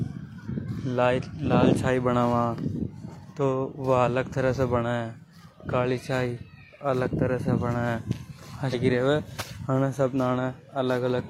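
A stream segment skipped at 8.69 to 8.75 s: the speech jumps abruptly forward with a short blip, and part of the programme is missing. The likely cause is one segment of the segmented stream failing to load, so the player continued with the next.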